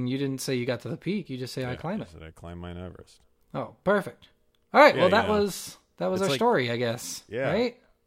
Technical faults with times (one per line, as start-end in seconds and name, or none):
none